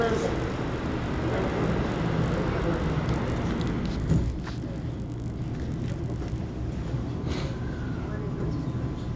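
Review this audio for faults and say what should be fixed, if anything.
Resampler restarted on every block, from 0.0 to 6.4 s: a buzz at 50 Hz rides on the sound because each 20 ms block was converted in isolation, leaving an error at every edge. This fits a 44.1 kHz to 16 kHz conversion. To prevent it, keep one resampler running across blocks so its filter history carries over from each block to the next.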